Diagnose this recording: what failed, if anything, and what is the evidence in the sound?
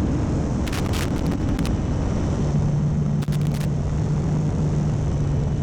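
Loose connector crackle in the analogue wiring: a worn contact intermittently breaks, chopping the signal into irregular scratchy bursts from 0.67 to 1.67 s and 3.22 to 3.65 s.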